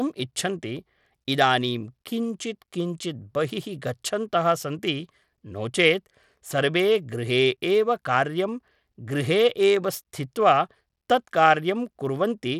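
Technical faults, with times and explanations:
Throughout, Bluetooth SBC compression: the speech treble flickers under gritty noise, likely from a starved bit pool that fits about 96 kbps; the spectrogram shows patchy, blocky upper bands.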